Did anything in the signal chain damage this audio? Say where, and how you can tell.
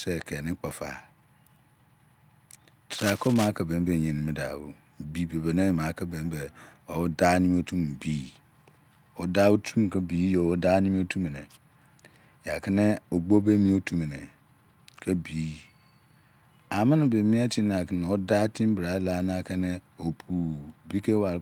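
Yes. Cable scratch noise runs from 2.93 to 3.49 s, just before "ki be mi": a dense, uneven rustle at roughly 10 dB below the speech. That points to the analogue wiring stage, likely a worn cable, connector or control being moved so its contact resistance jumps about.

Lost packets rebuilt from error correction show up at the network and codec stages, at 3.83 to 3.89 s just after "ki be mi" and at 13.31 to 13.45 s after "ya kini". There is no gap, but about 40 ms and 80 ms of audio turn rougher and noisier, which fits two and then four lost 20 ms packets. The decoder filled them from the low-bitrate copies carried in the packets that followed.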